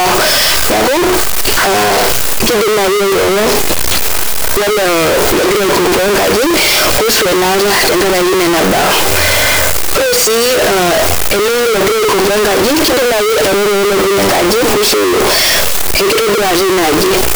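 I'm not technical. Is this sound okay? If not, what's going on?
No. Throughout this speech recording, the system has likely mixed up signed and unsigned samples, reading each 16-bit value with its top bit flipped. Every time the wave passes zero it leaps across the full range, so the whole clip sounds harshly distorted and loud, even in quiet moments.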